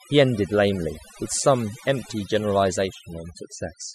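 From start to finish, the speech carries overdone noise removal. A noise reduction stage was pushed far too hard. It drives individual frequency bands down or out whenever their level sits close to its noise estimate. Quiet parts of the voice get caught and removed along with the noise. Between phrases, the background drops to near silence, dotted with twinkling specks.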